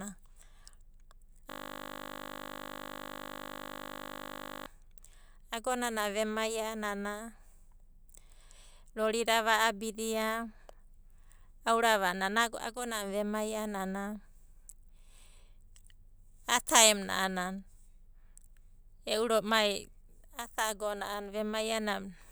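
From 1.50 s to 4.66 s the speech stops and a steady, rough buzz takes its place, pitched at 50 Hz and holding unchanged for over three seconds. This is a system hang loop: the computer or its audio driver froze, but the sound hardware kept replaying the last 20 ms it held in its ring buffer, so that one short fragment repeats exactly about 160 times. Because the loop is so brief, the repeats fuse into a tone rather than a stutter.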